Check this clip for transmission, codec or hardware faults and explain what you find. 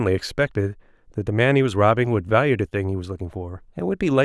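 No transmission, codec or hardware faults can be heard anywhere in the speech signal.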